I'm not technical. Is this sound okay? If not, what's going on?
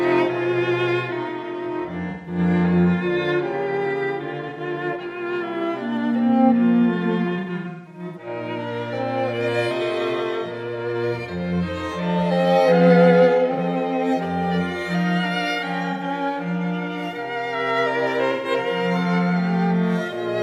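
No, there's AAC frame loss with concealment. Chunks of audio went missing and the player patched the gaps by guessing, so you hear brief smeared, noisy blips at 2.10–2.38, 4.49–4.60, 13.53–13.58, 15.92–16.03 and 18.31–18.51 s, plus a stretch of repeated smeared patches from 7.39 to 8.27 s.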